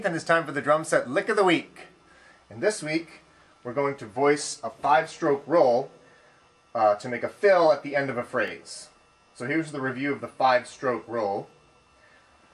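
A brief stutter, a tiny hitch where a sliver of sound plays twice, occurs at 3.46 to 3.48 s and again at 8.48 to 8.50 s. These are overlapping chunks. The audio was handled in pieces of 5 s, and each new piece began 20 ms before the previous one had finished, so those 20 ms are repeated at every join. The two hitches fall about 5 s apart, matching the chunk length.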